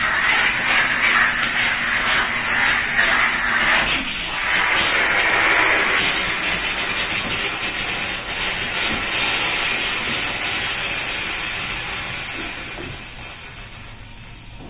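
Nothing goes wrong anywhere in this audio; there's not a single technical fault to point out.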